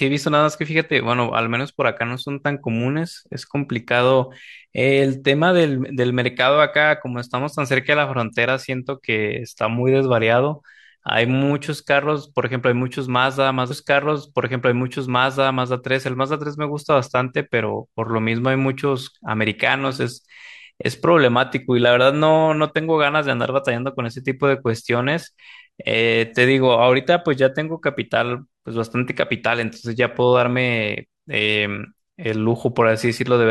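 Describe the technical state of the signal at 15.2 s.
At 15.2 s the player is partway through a repeated stream segment: it fetched or queued the same stretch of the programme a second time, so from 13.70 s to 15.70 s about 2.0 s of speech is played again. The listener hears a brief blip at 13.70 s where playback jumps back, then hears that earlier passage replayed word for word. Everything after it is pushed about two seconds later.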